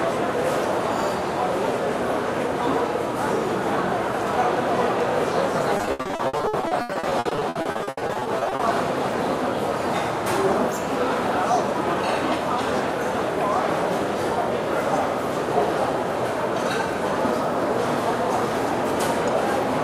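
From 5.77 to 8.61 s, repeated packet loss turns the sound choppy and robotic: 37 gaps, longest 80 ms, each patched by repeating prior audio, unlike silent dropouts.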